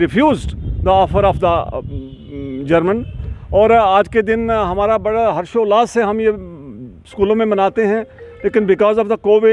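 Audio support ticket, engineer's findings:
No faults found: signal path intact, and no dropouts, discontinuities or timing irregularities detected anywhere in the clip.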